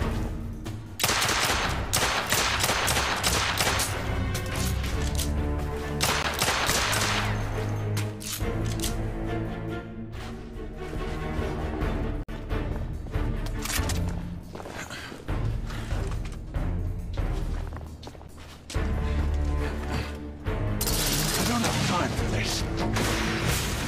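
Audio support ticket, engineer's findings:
Gap between stream segments at 6.23 s, 12.23–12.29 s and 18.28 s: hard-edged silences of 11 to 52 ms, 6 s apart. The segment timestamps leave holes, which the player fills with silence.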